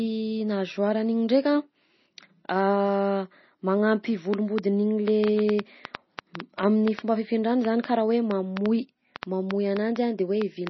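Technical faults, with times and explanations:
Throughout: MP3 compression, heavy damage that fits a low bitrate of about 24 kbps. Weak frequency lines switch on and off from frame to frame, giving a watery, swirly sound. Nothing remains above 5.9 kHz. A spectrogram shows a hard ceiling there, with patchy, speckled energy below.
4.34 to 10.68 s: train of clicks, roughly 30 similar pulses at an uneven pace averaging 4.4 per second, around 15 dB above the speech, ticking in the pauses too. This is likely interference or a faulty connection or supply. It shows as repeated spikes on the waveform and thin vertical lines on a spectrogram.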